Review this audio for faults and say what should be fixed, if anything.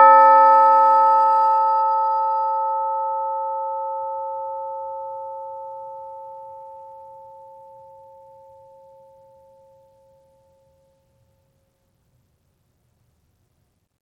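Bluetooth SBC compression, likely the cause, runs through the whole piece of music: the treble flickers and drops out while a gritty grain and aliasing sit on the sound. The upper sub-bands are being starved of bits, and the rest are coarsely quantised, which fits an SBC stream near 96 kbps. To prevent this, record or monitor over a wired connection, or raise the Bluetooth link to a higher SBC bit pool or a better codec.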